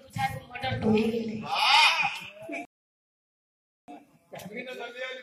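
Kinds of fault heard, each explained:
Rebuffering stall: The player ran dry of downloaded audio and had to wait for more data. At 2.65 s the sound drops abruptly to silence. The gap lasts about 1.23 s, until 3.88 s. Then playback picks up at exactly the point where it halted. No part of the audio is skipped or repeated. The pause simply adds that 1.23 s of dead air.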